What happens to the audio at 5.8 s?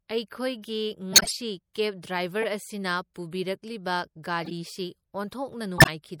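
From 5.77 to 5.89 s the speech jumps ahead by roughly 20 ms, with a short smeared blip at the join rather than a hard click. These are compressed frames skipped: whole frames went missing or were rejected as damaged. Around it the sound is plainly watery, likely from MP3 compression at a bitrate that fits about 64 kbps, which starves and drops weak frequency lines.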